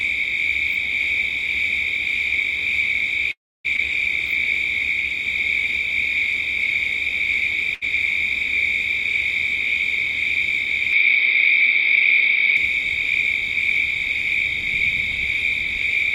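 Everyday sounds make up the clip, and four transport and capture faults are audible. From 3.31 to 3.66 s there is a call audio freeze: the sound stops moving forward, the last moment is carried on briefly as a fading tail, and about 290 ms of that hold is plain silence. The likely cause is packets held up in transit so that the jitter buffer ran dry. When audio returns it picks up exactly where it stopped, so nothing is lost, but roughly 0.33 s of extra delay has been inserted into the stream. Almost immediately afterwards, between 3.76 and 3.80 s, comes a skip ahead. Having fallen behind, playback discards about a fifth of a second of sound and joins the two sides with only a very short fill, so the event jumps forward abruptly with no audible gap. That wins back most of the added delay, at the cost of losing that slice of material. At 7.75 to 7.84 s there is a short stall from a late packet. 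One packet missed its slot, and the receiver stretched the preceding sound by about 70 ms until it turned up, then carried on from the same point. Nothing is missing, but that sound is held slightly too long, with a faint buzzy, smeared quality where the extension sits. From 10.93 to 12.57 s the input likely switched to a poorer device, at least in sound character. No silence marks the changeover, but the band suddenly closes off with nothing above 5.2 kHz, the tone turns duller and boxier, the level shifts by a few decibels, and a different background noise appears, sitting far below the signal. At 12.57 s the full bandwidth and original tone return just as abruptly.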